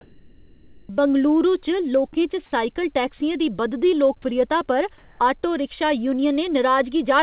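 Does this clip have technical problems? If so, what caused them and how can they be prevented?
Yes. From 0.01 to 0.89 s and again from 4.98 to 5.20 s, the sender's discontinuous transmission likely stopped sending during pauses, and the receiver played comfort noise instead. The real background, about 35 dB and about 31 dB below the loudest sound, becomes a flat, featureless hiss that shifts level by about 5 dB in the first stretch and about 1 dB in the second. Disabling DTX, or using comfort noise with finer spectral updates, prevents this.

At 3.18 s and 4.22 s, the sound dropped by the voice detector is likely caused by the detector briefly misjudging quiet sound as background. Each time about 10 ms of real sound is lost and replaced by 20 ms of steady noise, heard as a tiny dull gap in the audio, which is band-limited to 4 kHz by the call's G.711 codec. Adding detector hangover time or lowering its threshold keeps such quiet sound from being cut.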